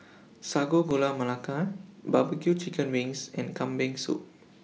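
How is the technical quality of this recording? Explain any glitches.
The speech has one audible glitch. At 0.91 s, a 1.25 ms block of digital silence drops samples abruptly to zero and back, causing a tick. The waveform shows a flat gap, and the spectrogram a thin broadband line.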